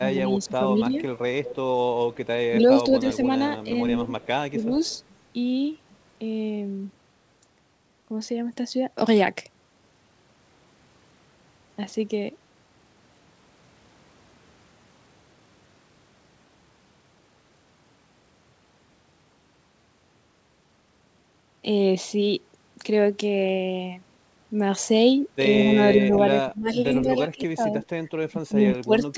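From 0.0 to 0.93 s the speech dips by about 5 dB in brief patches, roughly a third of a second in all. This is speech suppressed in double talk, likely from an echo canceller ducking the near talker while the far side also spoke. Unlike an echo, nothing is added. The voice itself just thins and sinks.

From 0.42 to 3.15 s an echo leak is audible as a second copy trailing 163 ms behind, about 15 dB under the speech. It is likely loudspeaker pickup that the canceller failed to remove. Because it repeats the sound instead of weakening it, it is distinct from suppression.

Between 2.5 and 4.7 s suppression returns, with drops of about 10 dB over around half a second. A fainter leak, about 25 dB down at the same 163 ms lag, follows from 4.09 to 4.99 s.

From 25.6 s to the end the voice is pushed down hardest, by about 20 dB. Inside that stretch, from 27.44 to 27.86 s, the 163 ms echo surfaces at about 20 dB below the speech.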